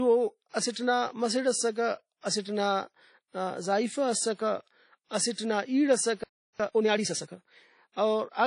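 WMA compression, likely, throughout: the transform codec leaves plainly audible washy, ringing damage and nothing above 10.1 kHz, which fits a 32 kbps encode.

Pre-echo at 0.49 to 0.54 s and 5.32 to 5.38 s: block-wide quantisation noise leaks ahead of sharp attacks, giving hiss spread over 43 ms and 55 ms.

Playback stall from 6.24 to 6.60 s: the sound stops mid-flow for 360 ms, likely because the player ran out of data or its thread was blocked.

Time-compressed catch-up from 6.60 to 7.30 s: the player drops and cross-fades small pieces to clear its backlog, so the audio runs 1.5 times fast at normal pitch.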